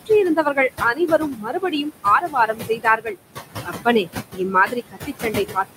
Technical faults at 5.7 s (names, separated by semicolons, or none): noise suppressor artifacts; speech cut by the noise suppressor